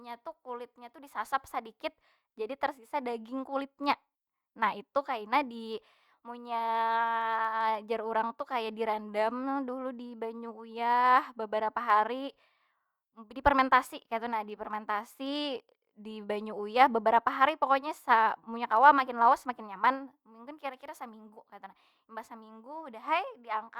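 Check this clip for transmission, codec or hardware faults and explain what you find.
There's a block size mismatch (truncated) running through the whole speech clip. One stage hands over longer blocks than the next stage reads, so the tail of every block gets dropped and the joins land right up against each other. That gives a steady buzz at about 43.1 Hz, which fits 1024-sample blocks at 44.1 kHz. The pace and pitch sound essentially normal, so the mismatch in sizes must be slight.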